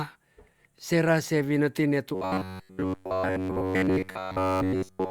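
From 2.15 s to 5.10 s, just after "sera se wineti ne", the audio was likely being starved of fresh data, with the playback software looping one short buffer of about 10.7 ms instead of passing new material through. This is robotic sound from repeated short buffers: essentially the entire stretch becomes a rigid, metallic buzz locked at 93.8 Hz, still loosely shaped like speech.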